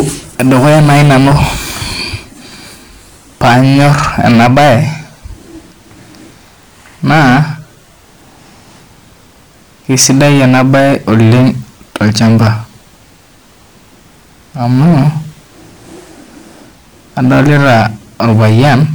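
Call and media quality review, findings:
Hard clipping, speech, five bursts: 0.00–1.47 s (about 13 dB overdrive), 3.41–4.83 s (about 14 dB), 9.90–11.49 s (about 11 dB), 14.63–15.09 s (about 8 dB), 17.18–18.85 s (about 11 dB). Harsh fuzz on loud syllables, milder crackle in the 14.6 s burst. Probable component: gain stage or converter driven past full scale. Peaks flattened. Waveform shows squared-off tops. Spectrogram shows vertical harmonic smear reaching the top band on each peak.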